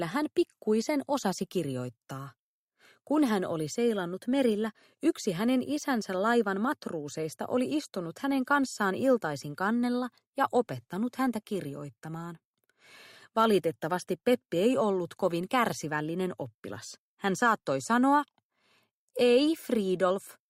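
Nothing in the audio stood out as a technical problem on listening.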